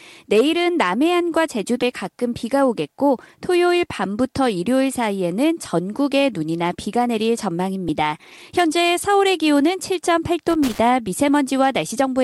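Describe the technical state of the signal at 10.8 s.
Right around there you're hearing the tail of a loose connector crackle, running from about 10.50 to 10.79 s. A worn or dirty contact is making and breaking, chopping the speech, so it comes across as a short, irregular scratchy burst.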